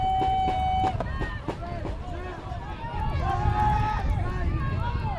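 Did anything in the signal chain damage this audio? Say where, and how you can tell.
Yes, at the sample-rate converter: a resampler restarted on every block, going from 48 kHz to 24 kHz, leaves steady ticks every 100 ms, a 10 Hz pattern throughout.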